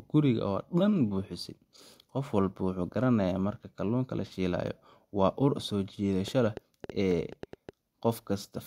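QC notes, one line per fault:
6.28–7.70 s, train of clicks: right after "shiilayo waa ur soo", about ten same-shaped pops at roughly 6.4 per second, unevenly spaced and peaking about 5 dB above the speech. That uniformity, unlike random crackle, points to a likely interference or interface pulse.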